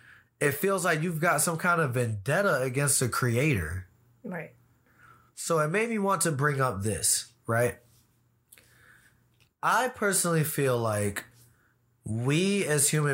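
Listening to this speech recording turned up nothing that stood out.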